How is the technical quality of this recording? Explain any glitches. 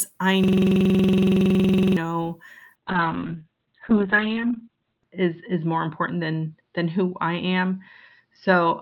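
The recording has two clear technical faults: a hard repeating loop near the start, and a drop into coarse, band-limited sound that lasts until the end.

From 0.44 s to 1.97 s there is a system hang loop. The host or audio driver stalled while the output hardware kept replaying the same ring buffer, so a single 46.4 ms slice of the speech repeats 33 times. That length fits a 2048-sample buffer. At 21.5 repetitions per second the result is a rapid, rattling stutter with a buzzy edge, not intelligible speech.

From 2.76 s to the end of the clip there is a call bitrate drop. The sender's bandwidth estimate fell, and the encoder cut its bit budget sharply. The sound points to a fall from roughly 32 kbps to about 6 kbps. The audio band narrows from a 20 kHz ceiling to a 4 kHz cutoff, so the speech turns muffled and rough with a watery texture. The worst stretch lasts about 2.3 s.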